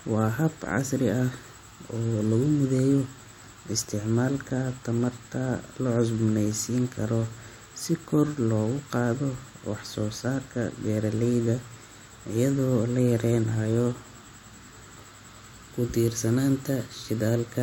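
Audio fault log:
No faults heard anywhere in this speech recording.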